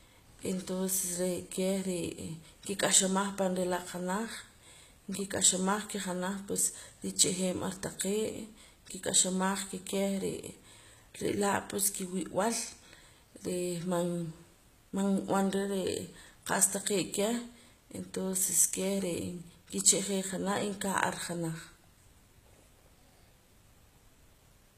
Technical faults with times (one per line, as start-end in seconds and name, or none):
0.00-24.77 HE-AAC compression